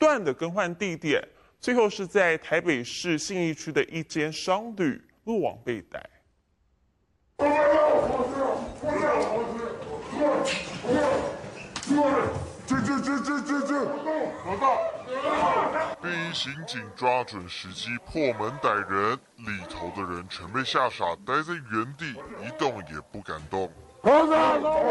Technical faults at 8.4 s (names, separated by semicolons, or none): wrong sample rate